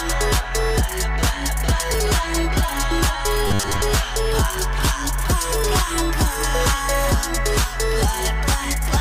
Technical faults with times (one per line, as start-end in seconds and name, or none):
3.47-3.81 robotic sound from repeated short buffers